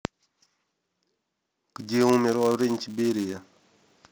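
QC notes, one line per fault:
Throughout: filter restarted on every block. There's a steady 200 Hz buzz riding under the speech, rising and falling with its level. The filter seems to drop its memory every 5 ms and start each block from scratch, so each block boundary kicks out a tiny click.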